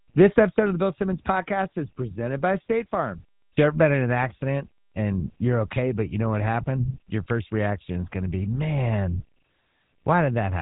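From start to finish the speech carries the sound of the GSM full-rate codec, and the damage is plainly audible. The codec rebuilds the voice from a vocal-tract model excited by regularly spaced pulses, with much of the excitation detail thrown away, which gives a buzzy, gravelly roughness. Nothing survives above 3.8 kHz, so sibilants and air are missing, and the density of the artefacts fits a bitrate around 13 kbps.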